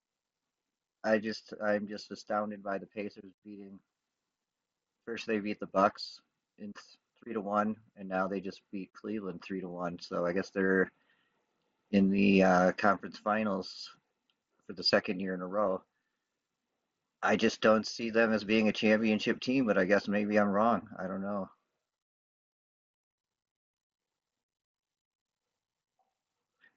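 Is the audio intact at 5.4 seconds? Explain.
Yes, the speech at 5.4 seconds is intact, with no fault at that moment.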